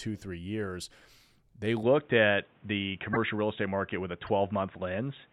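Input switched to a poorer device, from 1.83 s to the end: the speech abruptly loses its top end, with nothing above 3.8 kHz, so it turns dull and boxy with no gap at the change. The level shifts by a few decibels and a new noise floor appears well below the speech. The likely cause is the recording moving to a lower-quality microphone or a headset's call mode, which carries a narrower band and its own background noise.

Corrupt frame decoded, at 3.13 to 3.17 s and again at 4.27 to 4.29 s: each is a brief, single-frame artefact where damaged data was decoded as though it were valid. The misread values put energy at the wrong frequencies, which produces a short chirp or blip instead of the expected sound. The first burst is fairly loud. The second is much fainter.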